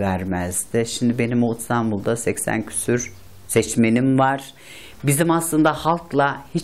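No faults can be heard anywhere in this audio.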